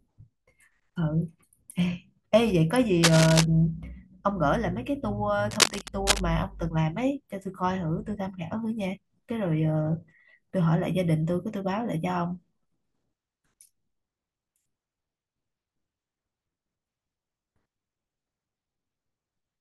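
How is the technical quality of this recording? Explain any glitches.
The speech has two short bursts of cable scratch noise, from 3.03 to 3.45 s and from 5.51 to 6.20 s. The likely cause is a worn cable or connector being moved, its contact resistance jumping erratically. That adds dense, ragged scratching about as loud as the speech itself.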